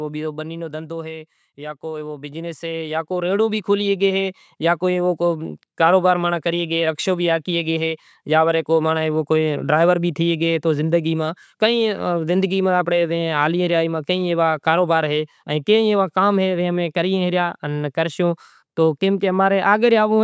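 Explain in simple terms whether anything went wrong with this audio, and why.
Something went wrong with the automatic gain control right at the start. From 0.05 to 1.35 s it judged the input too loud and turned itself down step by step, so the speech starts loud and then sinks, background and all. This is automatic gain falling.

Then from 1.55 to 7.79 s the same control decided the input was too quiet and turned itself back up over about six seconds. The speech and the background noise swell together, much louder by the end. This is automatic gain rising.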